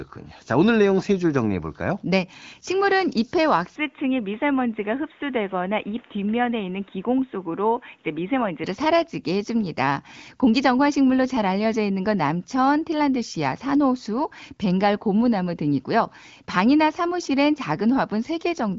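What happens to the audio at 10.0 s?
Nothing goes wrong at 10.0 s: the speech continues intact through that moment, carried by the AMR wideband (HD Voice) path at its usual bandwidth, which tops out around 7 kHz.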